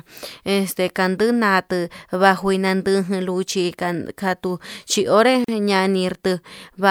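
A gap at a join of encoded pieces opens at 5.44 s: a 40 ms silence from untrimmed encoder delay and padding where separately encoded speech segments meet.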